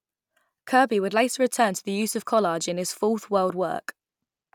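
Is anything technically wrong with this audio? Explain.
No, there's nothing technically wrong to point to here, as this bit of speech comes through without any fault that stands out.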